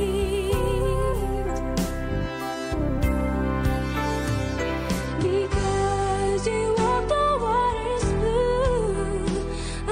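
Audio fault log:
5.05–9.91 s, adaptive stream at a lower bitrate: from 5.05 s to the end, the audio switches abruptly to a lower-bitrate rendition with no gap at the changeover. Nothing remains above 9.8 kHz, so the top end sounds dulled, and coding artefacts become more audible as the encoder discards detail to save data. The sudden, seamless drop in quality fits a stream stepping down from roughly 96 kbit/s AAC to about 32 kbit/s when throughput fell.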